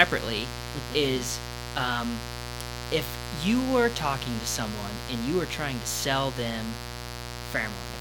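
Speech with a mains buzz running the whole way through. It's a steady, raspy 60 Hz buzz sitting only about 10 dB under the voice. Switching spikes from a dimmer, a rectifier or a missing shield come in twice per cycle, spraying harmonics into the kilohertz range.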